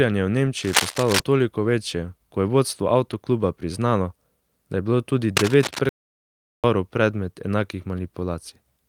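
Speech recording with three kinds of fault. Cable scratch noise appears twice: from 0.59 to 1.20 s at roughly the level of the speech, and from 5.36 to 5.79 s, just after "da je bilo tudi", at about 5 dB below it. Both sound like scratching or rustling laid over the voice, and the likely cause is a worn cable or connector being moved so that its contact resistance jumps around. On a spectrogram these stretches show dense, irregular broadband speckle across the frequency range. The waveform shows ragged spiky bursts riding on the signal. At 1.63 s, immediately before "večje ko je vodstvo", a 20 ms stretch sounds briefly coarse and grainy but never drops out. This is a lost packet rebuilt from error correction: the decoder filled the hole with the lower-quality backup copy carried in the next packet, which fits a single lost packet. A spectrogram shows a thin vertical slice with a noisier texture, while the waveform stays continuous. 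From 5.89 to 6.64 s the sound cuts out for about 0.75 s and then resumes at "predmet enakih", a playback stall most likely caused by the player running short of data or being held up before it could keep writing output. The waveform shows a flat line across that span, and the spectrogram shows a blank vertical band.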